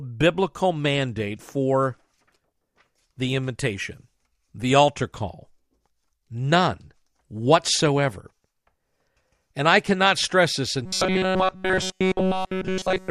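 A speech clip that goes robotic right at the end: from about 10.85 s through to the finish at 13.10 s you get robotic sound from repeated short buffers, with the speech collapsing into a rigid metallic buzz pitched at 188 Hz. Essentially the whole stretch is repeated material. The likely cause is audio arriving too slowly, so the playback side keeps looping a tiny chunk, which fits a buffer of roughly 5 ms, while the real audio gets skipped.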